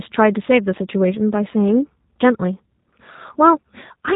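The speech has passed through a G.729 codec for its whole length, rebuilt from a filter model, pitch predictor and sparse pulses at a rate that points to 8 kbit/s. Nothing survives above 3.8 kHz, so the sound is muffled, plainly rough and synthetic.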